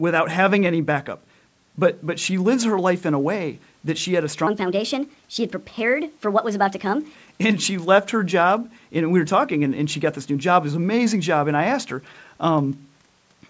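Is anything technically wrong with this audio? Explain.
Yes. From 4.47 to 7.15 s there is a section at the wrong speed. That stretch runs 1.32 times faster than the surrounding speech, likely because it was played back or resampled against the wrong clock. Pitch and tempo rise together, so the voice jumps up by roughly five semitones and sounds hurried and chipmunk-like, then drops back at 7.15 s. A pitch-shift fault would raise the pitch alone, and a time-stretch would rush the delivery alone. Here both move at once. The call's microphone processing also caps the audio at 8 kHz.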